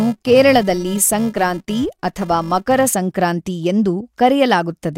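A speech clip with a buzz at 375 Hz riding under the sound from the start to 2.89 s, rising and falling with its level. This is a filter restarted on every block: it starts each block from silence, leaving a small transient each time, which fits a 128-sample buffer.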